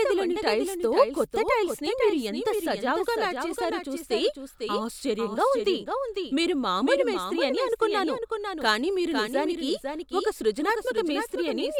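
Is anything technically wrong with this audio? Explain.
Yes. Throughout the clip there is a doubled audio track: the speech was likely captured a second time through a slower path, so a full-band copy, about 5 dB quieter, trails the original by roughly half a second, giving a dry, undecayed repeat of every phrase.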